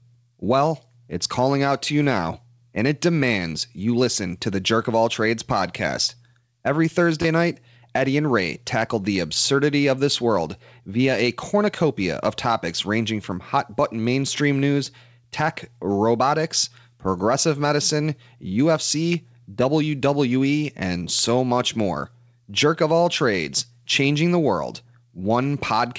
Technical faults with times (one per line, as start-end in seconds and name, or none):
7.22-7.24 repeated buffer
19.13 repeated buffer